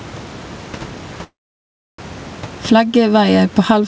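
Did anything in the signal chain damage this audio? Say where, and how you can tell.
Yes. Gain pumping throughout: loud and soft parts sit closer in level, with the gain ducking around 10 dB under loud speech, likely from input gain set far too high driving a fast limiter.

Call audio freeze at the network and jitter buffer, 1.24 to 2.00 s: sound stretches into a fading buzz or hiss, then about 0.67 s silence; likely delayed packets. Speech resumes intact, just later.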